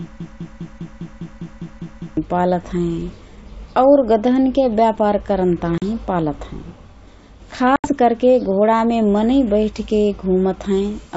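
From the first instant until 2.17 s, a broken-record loop is already under way: a 0.2 s fragment of speech repeats exactly, back to back, ten times, while whatever should have played there is lost. The cause is likely a stalled player or stream that kept resending its last buffer. On a waveform the same 0.2 s shape tiles identically; a spectrogram shows an identical block stamped repeatedly, with hard seams at each restart.

At 5.78 s comes packet loss on an ADPCM call: 40 ms, a couple of packets' worth, drops to silence, and the decoder's adaptive predictor and step size fall out of step with the sender's. The speech returns slightly distorted and settles by 5.83 s. A waveform shows a flat, square-edged gap followed by a distorted onset; a spectrogram shows a clean vertical blank.

A longer loss of 80 ms, a handful of packets, falls between 7.76 and 7.94 s, right before "करके घोडामे मनइँ बैठके". 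Again the mistracking decoder brings the speech back slightly distorted before it settles. On a spectrogram this appears as a wider blank column before the speech resumes. The G.722 coding at 64 kbit/s keeps speech clear to 7 kHz around these faults, with at most a faint upper-band hiss.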